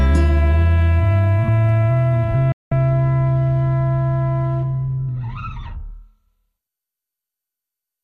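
At 2.52 s the music drops out in a digital broadcast dropout: the receiver mutes over about 3 ms and stays silent until 2.72 s, with 192 ms simply gone. The length suggests roughly eight corrupted frames. The muted frames leave clean silence, with no stutter or concealment noise.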